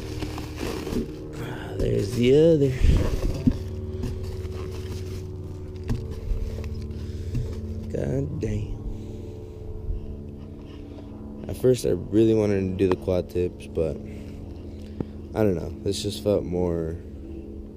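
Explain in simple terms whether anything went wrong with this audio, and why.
Yes. Two loud pops cut in, at 12.92 to 12.94 s and again at 15.01 to 15.03 s, each a single sharp burst well above the surrounding sound. A sudden electrical jolt from a plug, switch or static likely caused them. Unlike a dropout, the audio keeps playing underneath.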